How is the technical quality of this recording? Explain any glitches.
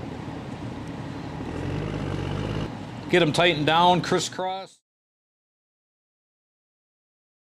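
No glitches; the level simply fades out smoothly by 4.83 s.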